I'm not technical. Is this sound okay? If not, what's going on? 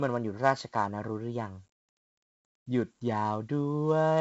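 No. The speech has a gritty hiss clinging to every loud moment and sounds dull, because 4-bit ADPCM compression stored each sample roughly, and nothing survives above 7.8 kHz.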